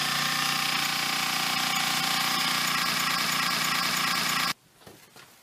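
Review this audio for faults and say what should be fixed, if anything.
Broken-record loop, 2.94 to 4.52 s: a 0.32 s fragment repeats exactly five times, replacing the audio due there, likely from a stalled player or stream resending its last fragment. To prevent it, add stall detection that mutes or skips ahead instead of replaying the buffer.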